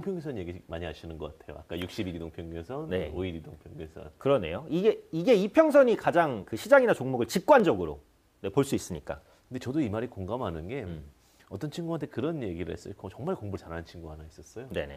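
Overlap between stream segments at 3.61, 7.60, 9.58 and 13.56 s: overlapping 2-second segment timestamps make a few milliseconds vanish, causing brief clicks or skips.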